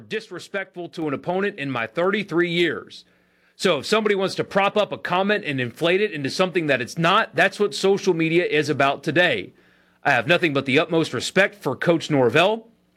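Microphone volume stepped up at 1.02 s, just before "an opponent in my": the input gain was raised by about 4 dB at once, lifting voice and background together.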